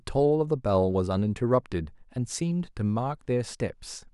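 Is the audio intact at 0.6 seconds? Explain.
Yes, at 0.6 seconds the speech plays through intact with no fault to be heard.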